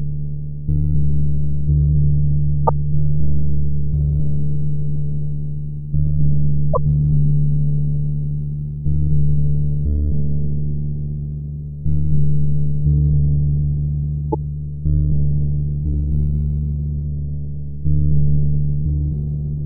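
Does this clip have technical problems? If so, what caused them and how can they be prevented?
Yes. A doubled audio track runs through the whole clip: a second, full-band copy of the sound sits roughly 300 ms behind the first at about the same level, with no decay or room colour, so every transient is followed by a clean, flat repeat. The likely cause is the same source being captured twice, once through a slower path such as a monitoring return or a duplicate input, with both copies summed into the mix. To prevent it, route each source into the recording once and mute any delayed return or duplicate input before mixing.

There is also damaged data in a compressed stream, heard as short chirps or blips at 2.67–2.69 s, 6.70–6.77 s and 14.32–14.35 s. Corrupted bytes in the encoded file make the decoder misread those frames, lose sync and skip forward until it finds the next valid frame header. 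The second event is the longest, at about 70 ms. To prevent it, transfer and store the compressed file over a reliable path and verify it with checksums, or re-encode from an intact source.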